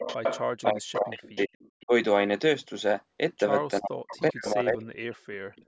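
Right from 0.0 to 0.41 s there's a delayed copy of the speech trailing about 0.39 s behind, only about 5 dB under it. It's echo leak, likely from a loudspeaker the echo canceller didn't fully cancel. It returns fainter at 0.93, 1.35, 1.6 to 1.85 and 4.1 s. Between 0.62 and 1.55 s the speech dips hard, roughly 40 dB, with another brief dip at 1.86 s and a long one from 3.8 to 5.63 s. That's speech suppressed in double talk, likely where the canceller ducked the talker while the far side spoke.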